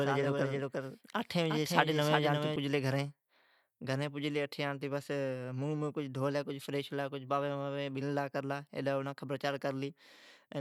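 Speech, with a doubled audio track from the very start until 2.56 s. A second full-band copy of the speech runs behind the original. It trails by about four-tenths of a second. It sits roughly 5 dB below the main signal. The copy has no decay and no room colour, so it is not an echo. It cuts off abruptly at 2.56 s. The likely cause is a second, slower capture path or two out-of-step copies left in an edit.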